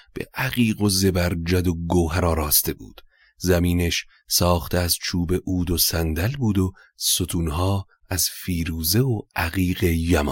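Speech recording with no audible technical faults at any point.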